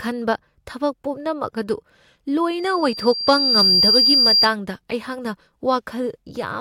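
At 2.58 s a loudspeaker feedback squeal starts under the speech. The microphone is picking up the loudspeaker it feeds. At one frequency the loop gain has passed one, so that frequency keeps reinforcing itself. Here it is a steady tone at 4.8 kHz. It swells over about a second until it sits roughly 10 dB above the speech. It is piercing and whistle-like. The loop is broken and the squeal stops at 4.51 s.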